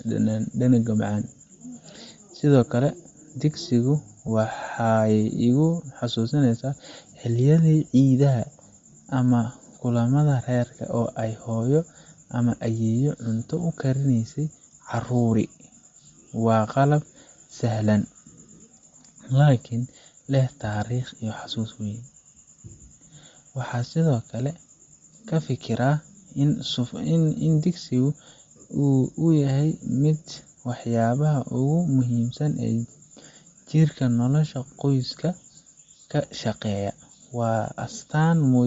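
Across the whole recording the speech carries a breathy, grainy edge, with the upper frequencies sounding thin and hissy rather than crisp. That points to Bluetooth LC3 compression, likely at a bitrate around 32 kbps with 10 ms frames, where the codec discards much of the top band and fills it with noise. At 4.27 s a brief 10 ms smear interrupts the speech, consistent with one lost LE Audio frame. The decoder appears to have reused the previous frame's spectrum with randomised signs, leaving a short noisy patch.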